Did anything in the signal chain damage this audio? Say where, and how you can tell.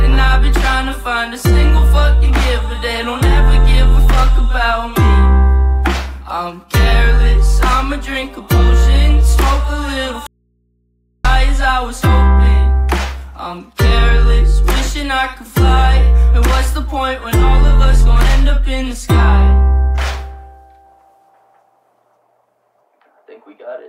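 Yes. An audio dropout to a faint residue runs from 10.27 to 11.25 s. The sound cuts off abruptly for about 0.98 s, and only mains hum around 50 dB down remains. A live but open input points to a likely intermittent analogue wiring fault.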